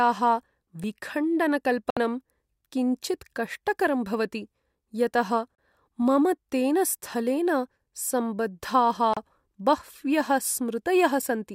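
A dropped buffer (overrun) is the likely cause of two jumps in this speech recording, at 0.84 s and 6.02 s. At each one the sound jumps forward with no gap, as if a few milliseconds were cut out and the edges spliced. That is what happens when software fails to read a capture buffer before the hardware writes over it. The audio on either side meets abruptly. A digital broadcast dropout accounts for three short silences: 1.90 to 1.97 s, 5.56 to 5.59 s and 9.14 to 9.17 s. The first lasts about 64 ms and the others about 32 ms each, which points to two lost frames and then one apiece. The receiver muted when the incoming data failed or went missing and resumed once clean frames arrived, so whatever was transmitted in those holes is simply gone.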